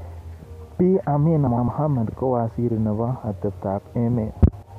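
Frames out of order: two neighbouring runs, each about 105 ms and consistent with four frames apiece, were decoded in swapped order at 1.47–1.68 s, just before "kowaziri nebo", and again at 4.42–4.63 s. Each stretch plays with its halves exchanged, giving a garbled flutter, without losing time.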